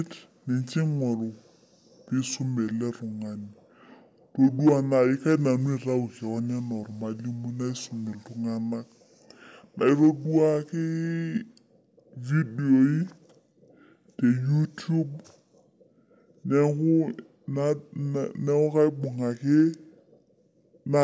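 Wrong sample rate throughout: the speech runs at 0.667 speed and 7 semitones low, which fits 24 kHz audio played at 16 kHz without conversion.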